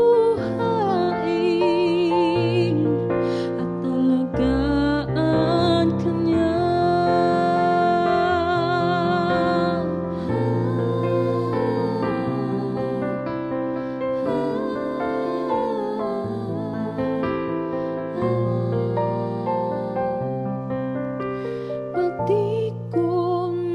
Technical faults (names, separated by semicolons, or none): short concealed packet loss